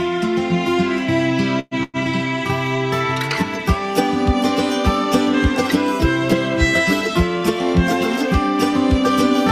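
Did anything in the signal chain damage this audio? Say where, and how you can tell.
Yes. There are two call audio freezes, from 1.59 to 1.74 s and from 1.83 to 1.97 s. In each, the sound stalls and its last moment carries on as a fading buzz for about 120 ms, then about 100 ms. A short silence of roughly 10 ms follows. The audio then resumes where it stopped, with nothing lost, only delayed. The likely cause is network packets arriving late and the jitter buffer running dry.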